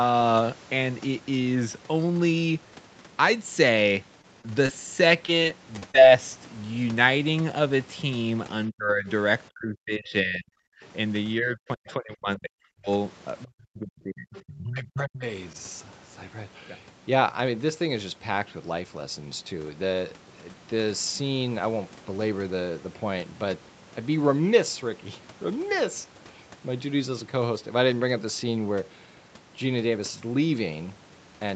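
Around 4.21 s, 4.41 s and 4.66 s there are three bits of short concealed packet loss. Each time about 20 ms of audio never arrived, and the decoder papered over it by stretching the last sound, so you get quick little smears or wobbles.

Then from 5.26 to 5.96 s there's repeated packet loss with a robotic sound. Five gaps land close together, the longest about 25 ms, so roughly 12% of that stretch is patched. It comes out choppy as one fill follows another.

Speech suppressed in double talk shows up at 8.69–9.08 s, 9.49–10.66 s, 11.39–12.89 s and 13.44–15.24 s. The voice sinks by up to about 35–40 dB or breaks up in chunks. That's likely the echo canceller ducking everything while both ends talked at once.

Inside those stretches, at 11.89–11.93 s and 14.35–14.58 s, there's the other side's voice leaking through, a scrap about 25 dB below the talker. It's likely loudspeaker echo the canceller missed. 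The whole clip tops out at 8 kHz, which fits the Opus wideband call path.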